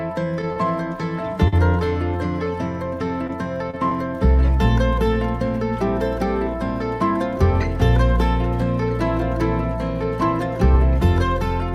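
Short concealed packet loss occurs at 0.53–0.58 s, 1.48–1.58 s, 3.27–3.30 s, 3.70–3.75 s and 3.89–3.92 s. Each time, about 20 ms of audio arrived too late to decode (40 ms at 1.48 s). The receiver bridged each gap by extending the preceding sound before blending back into the real signal. The result is a brief smear or wobble. At 1.48 s the passage runs slightly long.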